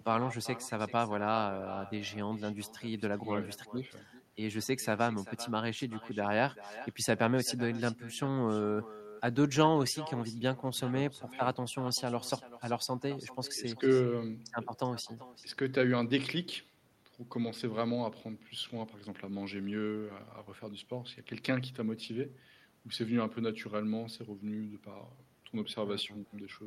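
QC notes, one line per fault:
throughout, echo with no canceller: every phrase is shadowed about 16 dB down by a thinner copy arriving roughly 0.4 s later. The far end's loudspeaker feeds its microphone, nothing cancels that path, and the speech returns after the network round trip.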